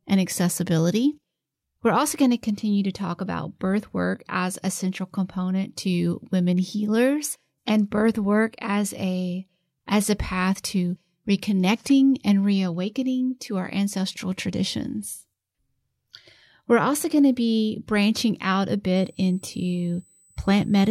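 A speech recording with USB whine from 18.96 s to the end: a steady 8 kHz tone about 35 dB below the speech, from current drawn in 125-microsecond bus microframes leaking through power or ground. Unlike mains hum, it sits at a fixed high pitch, not 50 or 60 Hz harmonics.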